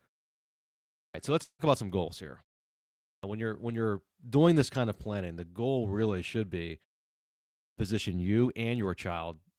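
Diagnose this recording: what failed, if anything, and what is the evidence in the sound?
The playback end is the main culprit here, with clipped starts after a pause at 1.0 s, 3.10 s and 7.62 s. Each time, speech comes out of silence already underway, missing roughly 140 ms, 130 ms and 150 ms of its opening. The pauses before them run 1.0 s, 0.76 s and 0.86 s, long enough for the output device to doze off and need a moment to wake and lock again, swallowing those first sounds.

From 1.43 to 1.62 s there's a gap that sounds like a long network dropout, most likely packets not arriving on the call path. The receiver papers over it by extending the last sound as a fading buzz or hiss, filling about 150 ms that ends in roughly 70 ms of plain silence, before the audio picks up again further along. About 160 ms of the original never gets played, so the speech resumes with a chunk missing rather than just delayed.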